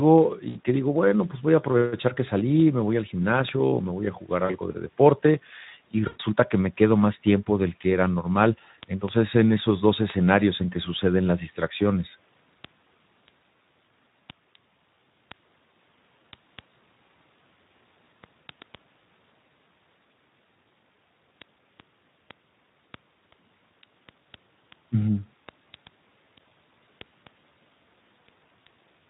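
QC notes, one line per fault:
Throughout: Speex codec. The CELP coder has too few bits for the excitation, which fits a setting around 11 kbps. The speech sounds plainly noisy and hoarse, and the upper band carries only a shaped noise fill instead of real detail.
0.18 to 29.05 s: word clock ticks. Short single-sample ticks recur about every 0.15 s, roughly two hundred in all, at uneven strength. The receiving device's clock drifts against the sender's by something like 150 ppm, so a sample is dropped or repeated at each slip.
0.49 to 0.59 s, 4.45 to 4.56 s, 6.07 to 6.21 s: VoIP packet loss concealed by the speech codec. About 60, 40 and 120 ms of audio are missing. The decoder stretches its last pitch and filter into a fading buzzy tone or coloured noise, and the sound stays weak or distorted briefly after each gap.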